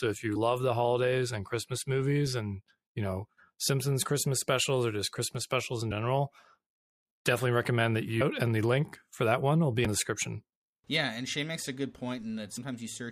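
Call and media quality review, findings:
Damaged data in a compressed stream, speech: short blips at 5.9 s, at 9.85 s (between "that one will be" and "the description") and at 12.56 s, each under 20 ms. Probable component: decoder input. Corrupt frame bytes are misread, sync is lost, and the decoder resumes at the next frame header, so each event is a brief glitch.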